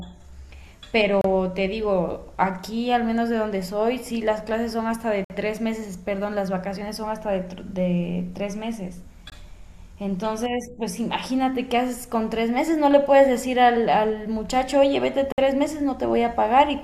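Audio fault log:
1.21–1.24 s, 5.24–5.30 s, 9.30–9.32 s, 15.32–15.38 s: gap between stream segments. The speech cuts out abruptly into digital silence for about 31, 55, 21 and 59 ms, with hard edges on both sides. The spacing fits 2-second segment boundaries, where consecutive segments' timestamps do not quite meet and the player pads the shortfall with silence. Nothing is missing from the speech; each hole adds time rather than removing audio.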